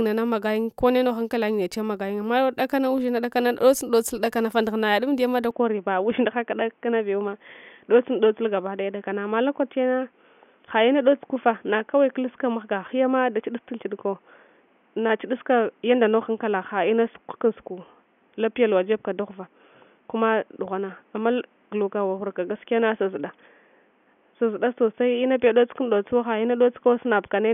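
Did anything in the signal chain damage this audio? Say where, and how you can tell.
Yes. From 5.51 s to the end, the speech abruptly loses everything above 3.5 kHz and turns dull and boxy, with no gap at the changeover and no real jump in loudness. A new noise floor also appears, sitting roughly 40 dB below the speech. That combination most likely comes from the input being switched to a poorer device at the capture stage, such as a headset's call profile, whose narrower passband and own noise replace the original microphone's sound.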